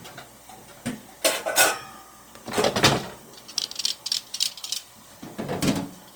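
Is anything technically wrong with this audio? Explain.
Yes. Throughout, the sound is noisy, rough and grainy, and this is likely Opus compression in its music mode at a rate that fits 24 kbps. Content still reaches about 20.2 kHz. Starved bands are refilled with folded or noise energy, not left empty, so there is less swirl than with MP3.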